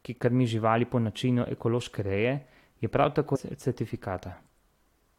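At 3.35 to 3.37 s, just after "reje je prav", the speech jumps abruptly forward with a brief blip. The likely cause is a stream segment skipped, where one chunk failed to load and playback resumed at the next. Unlike a dropout, there's no silent gap.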